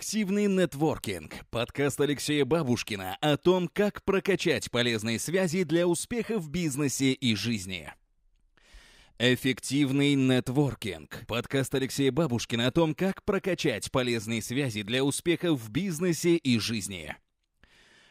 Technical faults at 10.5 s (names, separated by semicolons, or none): none